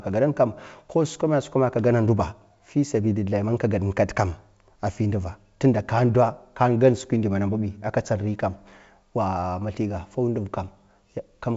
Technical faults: none

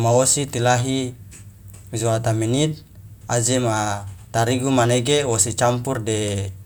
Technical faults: none

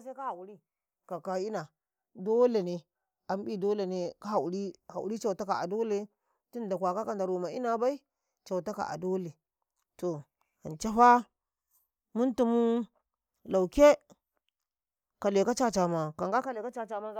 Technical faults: none

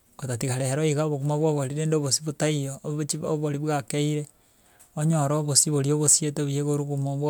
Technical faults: none

